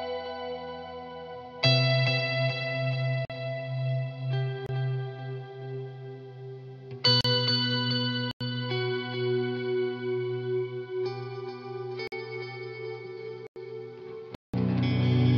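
Blocks of digital silence at 3.25, 4.66, 7.21, 8.31, 12.07, 13.47 and 14.35 s, lasting 26 to 186 ms. The output buffer likely went unfilled, so the sound snaps to zero and back. The longest, at 14.35 s, is a short hole.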